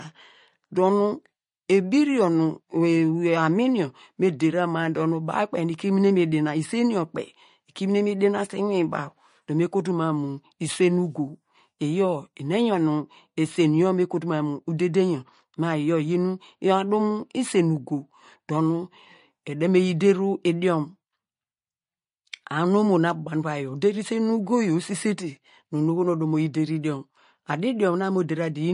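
From start to finish the speech has a watery, swirly edge, with nothing above 10.6 kHz. That's likely MP3 compression at a low bitrate, something like 40 kbps, where the encoder drops the treble and lets weak detail flicker between frames.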